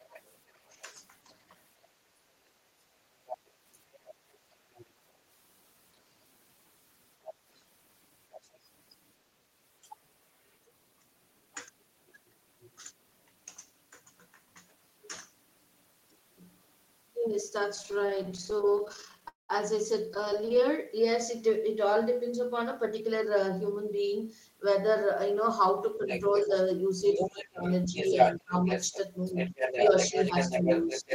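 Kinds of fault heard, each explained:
Other side's voice leaking through: A second voice sits under the speech at times from 0.08 s onward. It is strongest near the end, only about 5 dB down. Likely an incompletely cancelled loudspeaker echo.
Speech suppressed in double talk: The talker dips briefly by about 20 dB at 2.11 s, then by about 15 dB from 25.98 s. Both sides likely talked at once.
Repeated stalls (stutter): From 17.75 to 19.26 s and 20.09 to 20.63 s, sound drags in many tiny waits. About a quarter of each span is filled-in sound.
Call audio freeze: At 19.28 s the audio halts for about 0.2 s, mostly silent, then resumes where it stopped. Delayed packets likely emptied the buffer.
Jitter buffer speed-up: Sound runs hurried at unchanged pitch, 110% speed at 22.93 to 23.43 s and 106% at 28.38 to 29.74 s, as backlog is trimmed.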